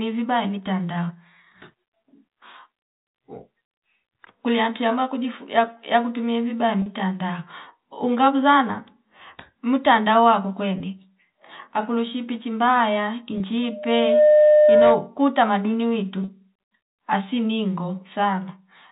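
Speech over a telephone-band line, heard through G.711-style coding. Packet loss with pitch repetition causes brief buzzy holds at 6.82 s after "yakutumie vibaya" (40 ms), at 10.78 s and 13.38 s (20 ms each), and at 16.24 s after "tamaduni witu" (40 ms). The receiver repeats the last pitch period to bridge each gap. The 20 ms gaps fit single lost packets, and the 40 ms gaps fit two. A loudspeaker feedback squeal runs from 13.62 s to 15.11 s. A 603 Hz tone swells over under a second and reaches roughly 10 dB above the speech. The microphone is picking up its own loudspeaker, and the loop gain exceeds one at that frequency.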